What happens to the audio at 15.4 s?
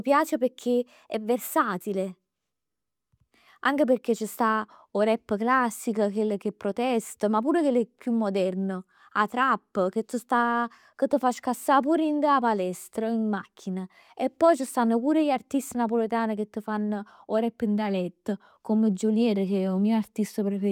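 Nothing goes wrong at 15.4 s; the speech carries on intact through that moment with no dropout, click or distortion.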